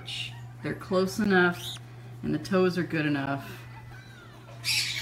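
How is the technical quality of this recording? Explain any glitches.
The recording has two brief dropouts, at 1.24 s and 3.26 s, each a hole of about 13 ms with abrupt edges where the sound simply stops and restarts. This is a gap between chunks. The audio was handled in 2.0 s blocks, and at each join a short stretch of silence was inserted rather than the next block following seamlessly. No sound is lost, but its flow is clipped at those two regularly spaced joins.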